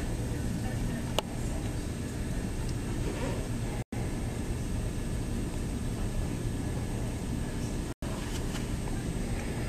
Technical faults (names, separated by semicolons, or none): gap between chunks